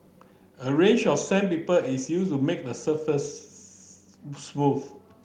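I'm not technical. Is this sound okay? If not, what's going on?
Yes, the recording is technically sound, with nothing in it that signals a problem in how it was captured or played back.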